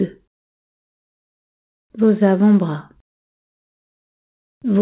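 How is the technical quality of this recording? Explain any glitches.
No glitches to report: the audio is band-limited to 4 kHz with the light grain of a narrowband call path, consistent with G.711 mu-law at 64 kbps.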